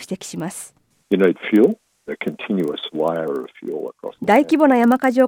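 Throughout, a filter restarted on every block resets its state every 40 ms, adding a 25 Hz tick-buzz; waveform shows regular transients, spectrogram evenly spaced vertical lines.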